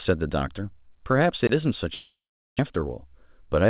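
At 1.47 s to 1.49 s the speech drops into a block of digital silence lasting about 21 ms, which fits one 1024-sample buffer left unfilled. The signal falls straight to zero and jumps back with no fade, so it is heard as a short hole. Unlike a network loss, nothing is smeared or continued across the hole: it is a clean, hard-edged cut.

From 1.94 s to 2.61 s comes a long network dropout. About 600 ms of audio never arrived, most likely because packets stopped coming over the network. For the first short stretch the receiver stretches the last sound into a fading buzz, and then roughly 400 ms of near-silence remains. The speech resumes with that section simply gone, and the delay afterward sits slightly shifted. The fading fill before the silence is what separates this from a hard zeroed block.

From 3.19 s to 3.66 s a jitter buffer speed-up plays the speech at about 107% of its speed by repeatedly removing pitch-period-length slivers, about 40 ms in total. 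The pitch stays where it was, but the delivery sounds rushed, which distinguishes it from a resampling error that would raise the pitch. Throughout, the G.711 A-law call path leaves nothing above 4 kHz, giving the familiar narrowband telephone sound.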